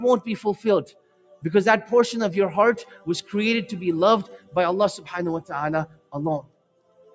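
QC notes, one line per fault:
Throughout, noise suppressor applied to music or sounds: the level pumps and flutters, swinging by around 20 dB as held portions sink while attacks come through. A speech-tuned suppressor is treating steady, sustained material as noise and repeatedly pulling it down.
0.84–1.43 s, 2.82–3.33 s, 4.24–4.57 s, 5.86–6.15 s, 6.41–7.15 s, sound cut by the noise suppressor: the sound thins and dips, by about 20, 14, 15, 20 and 20 dB respectively. The suppressor judged these stretches to be noise and attenuated them harder than the rest.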